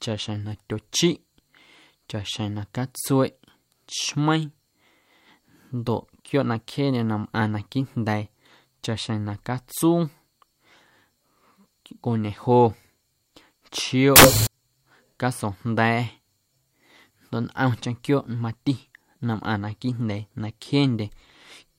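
Samples built from the wrong bytes, 14.16 to 14.47 s: the byte order or alignment slips, so low bits dominate, bursting into loud, harsh broadband noise.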